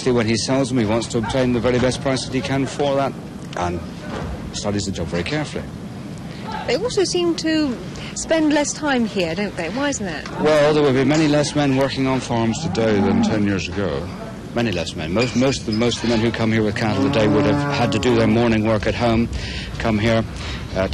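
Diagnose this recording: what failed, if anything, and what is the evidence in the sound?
From 12.32 s to 14.00 s the sound suddenly drags and drops in pitch by about two semitones, then snaps back to normal speed. Because tempo and pitch shift together, this is a section at the wrong speed, running at 0.893 times the original rate. The likely cause is that stretch being played back or resampled against the wrong clock, so its samples were read out too slowly at the playback stage.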